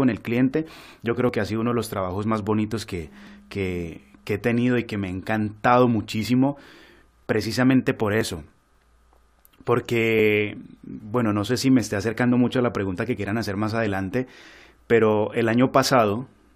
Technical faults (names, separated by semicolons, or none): overlap between stream segments